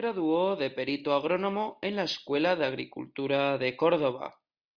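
Nothing stood out as a technical fault on listening to the speech in this recording.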